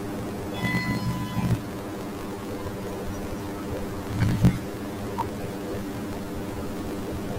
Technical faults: planar audio read as interleaved

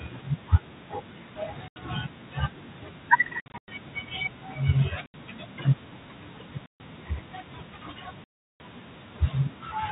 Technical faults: packet loss filled with silence

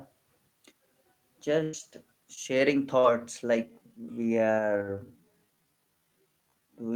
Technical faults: burst of packet loss; short concealed packet loss; time-stretched section

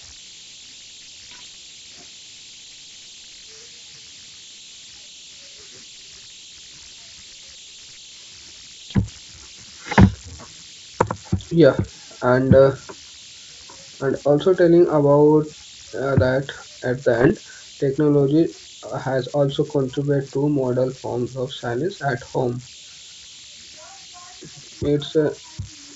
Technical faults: converter idle tones; bit errors on an ADPCM link

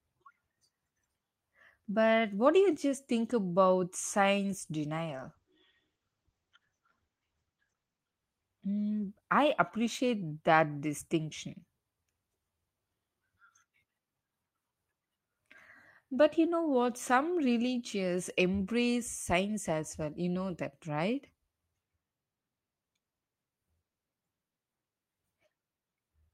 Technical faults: call bitrate drop

